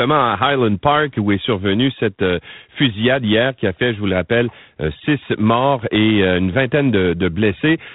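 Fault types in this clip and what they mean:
G.726 ADPCM: the speech is coded as a few bits per sample of difference from an adaptive prediction, and the coarse steps leave a harsh, rasping hiss that rises and falls with the speech level, which fits the 24 kbit/s mode; nothing passes above 3.9 kHz.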